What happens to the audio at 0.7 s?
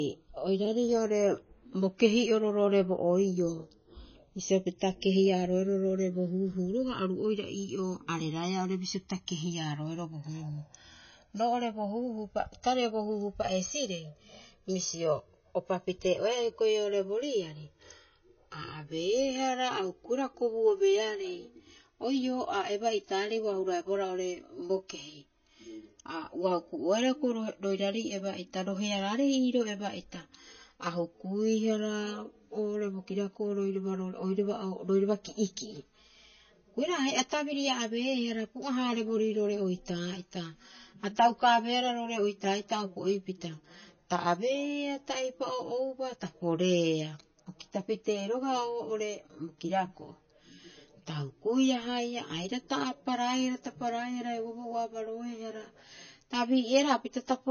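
A repeated buffer at about 0.65 s: one 5 ms chunk plays three extra times, a brief buzz that shows on the waveform as an identical short cycle with hard joins. Throughout, channels drifting apart (a clock error of roughly 150 ppm, delay growing to about 7 ms) give slow flanging, seen as comb notches sweeping across the spectrogram. Also throughout, watery, swirly smearing likely comes from MP3 compression at 24 kbps, with a hard ceiling at 6.6 kHz and flickering gaps in the spectrogram.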